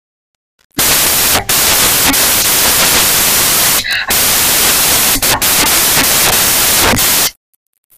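Samples built from the wrong bytes run through the whole clip. The reader assembles each sample's bytes wrongly, so the rapidly changing low bits take the role of the large part of each value. The speech turns into loud, harsh noise, close to white on the louder sounds.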